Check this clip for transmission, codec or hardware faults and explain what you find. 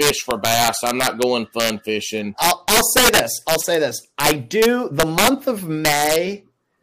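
One fault is present. Integer overflow runs throughout: speech driven about 12 dB too hot wraps to the opposite sign on a small fraction of peaks, giving violent cracks, sharper than clipping's flattened buzz.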